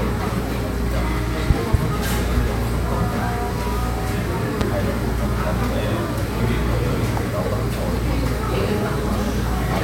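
At 1.50 to 1.77 s two sharp loud pops land in quick succession, and at 4.61 to 4.64 s a single one follows. Each jumps roughly 20 dB above the surrounding sound, which carries on beneath it. The likely cause is a sudden voltage step or spike, such as from a plug, switch, static discharge or driver glitch, entering the signal path, where the following circuitry shapes it into a brief thump.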